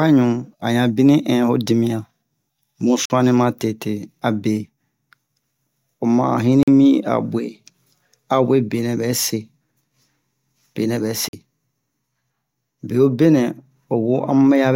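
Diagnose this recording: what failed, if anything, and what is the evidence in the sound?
The speech drops out three times into a block of digital silence, each about 46 ms long: 3.05 to 3.10 s, 6.63 to 6.68 s and 11.29 to 11.33 s. The identical length fits a 2048-sample buffer, so the fault lies at the driver or buffer stage, where the output buffer was not filled in time and zeros were sent instead. Each gap is heard as a short hole with abrupt edges. On a waveform the trace drops to a flat line, and on a spectrogram a clean vertical blank appears.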